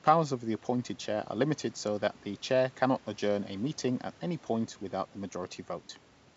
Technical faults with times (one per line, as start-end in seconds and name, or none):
none